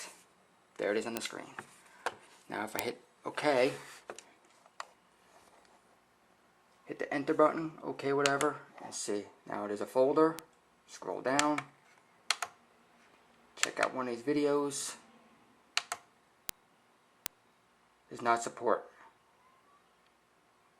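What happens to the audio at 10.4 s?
At 10.39 s there is a single bit error spike. It lasts only two samples. A flipped bit in a digital value made the waveform jump by a power of two, then snap straight back. The peak reaches about -17 dBFS. It is heard as one sharp tick. The click is broadband, spread across the whole spectrum. It bears no relation to the surrounding sound.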